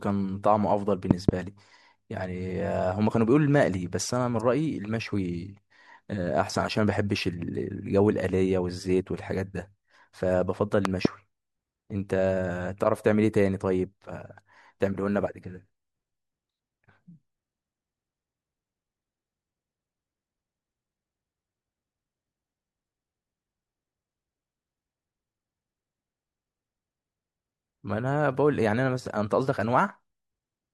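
At 1.11 to 1.31 s and 10.85 to 11.08 s, a loud pop strikes as two quick thumps, about 20 dB above the continuing speech, likely a voltage step from a plug or switch. Each appears as twin waveform spikes and thin full-height spectrogram lines.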